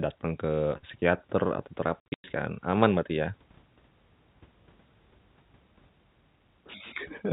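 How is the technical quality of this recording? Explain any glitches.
The recording has one clear glitch, a burst of packet loss filled with silence. It runs from 2.0 to 2.24 s, right after "datang ke psikiater atau". The network dropped packets, and the receiver inserted silence instead of concealing the loss. About 200 ms of the 240 ms stretch is missing, in gaps whose lengths fit 20 ms packets, with the longest run 100 ms. The speech is chopped into fragments by abrupt cuts. The telephone-band G.711 coding keeps everything below 4 kHz.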